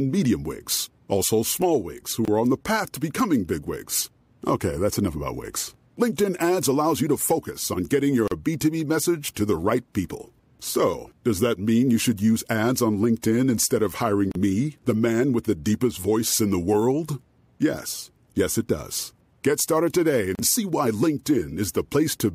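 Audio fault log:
2.25–2.28 s, 8.28–8.32 s, 14.32–14.35 s, 20.35–20.39 s: gap at a join of encoded pieces. Every 6.0 s, speech drops out for 26 ms, then 37 ms, where separately encoded segments meet with start delay and end padding untrimmed. The waveform shows flat holes with smeared edges, and the spectrogram shows narrow blank vertical stripes.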